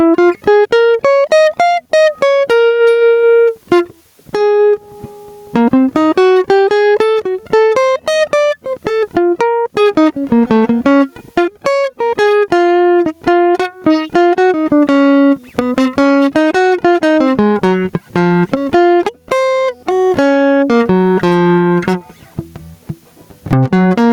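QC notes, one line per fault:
Throughout: gain pumping. The level ducks sharply under each loud hit, swinging by something like 20 dB, so the level seems to breathe in time with the playing. Quiet and loud passages sit much closer together than they should, and the whole mix sounds squashed. This is likely an input gain set far too high, with a fast limiter or compressor clamping down on each peak and recovering between them.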